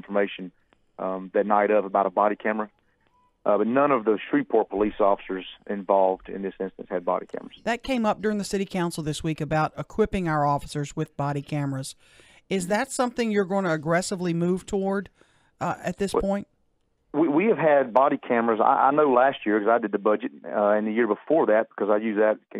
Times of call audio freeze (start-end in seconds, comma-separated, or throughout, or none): none